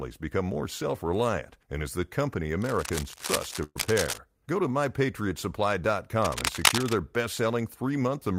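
Right after "and is the company", from 2.62 to 4.18 s, cable scratch noise rustles and scratches over the speech at roughly the same level as the voice. The likely cause is a worn cable, connector or control carrying DC being moved, so its contact resistance jumps around. On a spectrogram this shows as dense, irregular broadband streaks. The waveform carries ragged, spiky bursts on top of the speech.

Inside that stretch, from 3.63 to 3.77 s, a burst of packet loss interrupts the audio. The receiver filled about 119 ms by extending the last sound and fading it down. It then rested on about 20 ms of silence and resumed with about 120 ms of audio missing. A spectrogram shows a smeared, unchanging band that dims away, then a clean gap and an abrupt jump. The waveform decays, goes flat briefly, then restarts.

From 6.22 to 6.94 s the cable scratch noise returns, likely from the same kind of contact fault, this time somewhat louder than the speech. 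It appears as the same crackling rustle, with broadband streaks and jagged waveform bursts.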